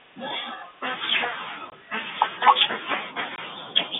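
At 1.70 to 1.72 s and again at 3.36 to 3.38 s, the receiver lost incoming audio and played silence in place of the missing data, a fault known as packet loss filled with silence. Each gap lasts 20 ms, which fits a single lost 20 ms packet. The speech stops dead for that instant and resumes abruptly with hard edges on either side of each hole, within the narrow 150 Hz to 3.6 kHz telephone band.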